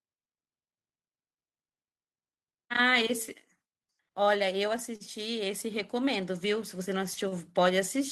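Speech with three short stalls from a late packet: at 4.96 to 5.02 s the sound is held for 44 ms, then at 7.14 to 7.18 s for 22 ms and 7.28 to 7.34 s for 31 ms. Each time the jitter buffer ran dry, so the last sound was stretched with a slight buzz or dip until the packet arrived. Unlike a lost packet, nothing is cut out and speech resumes exactly where it stopped, just slightly later.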